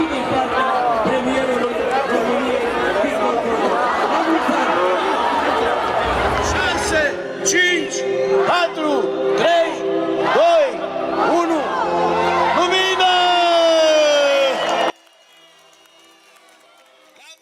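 From 14.9 s to the end of the clip, the summed level drops by about 31 dB and the sound all but disappears, leaving only a faint residue. The likely cause is one channel inverted: with one side of the stereo pair in reversed polarity, everything common to both channels cancels when they are combined to mono, so centred material and low frequencies collapse and only the small difference between left and right remains audible.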